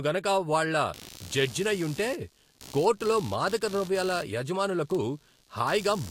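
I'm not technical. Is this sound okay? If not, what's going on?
No. From 0.94 s to the end there is computer activity noise: a buzzy, chirping sound pulsing about seventy times a second, quieter than the speech. The computer's working load is disturbing the audio wiring, so the noise follows the machine, not the voice.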